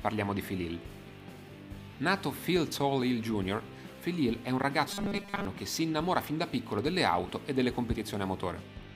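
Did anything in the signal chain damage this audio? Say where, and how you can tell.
Yes. At the driver or buffer stage, fresh audio likely arrived too slowly, so a 5 ms block kept replaying. From 4.88 to 5.45 s this causes robotic sound from repeated short buffers: a rigid, metallic 200 Hz buzz across most of that stretch.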